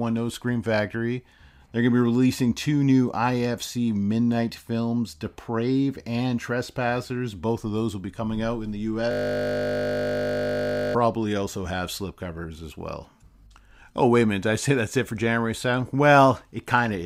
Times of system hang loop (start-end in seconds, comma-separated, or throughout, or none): 9.11-10.95